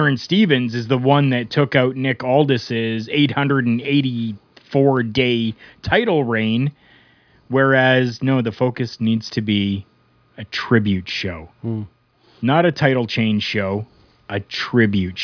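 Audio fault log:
No faults detected in this speech recording.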